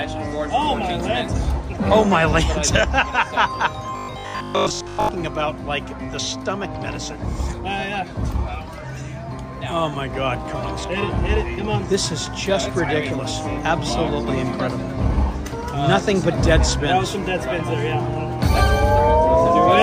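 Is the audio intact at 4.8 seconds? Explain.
No. From 3.97 to 5.09 s, new audio likely arrived too seldom, so the last 20 ms looped over most of the span. That left robotic sound from repeated short buffers, a rigid, metallic 50 Hz buzz.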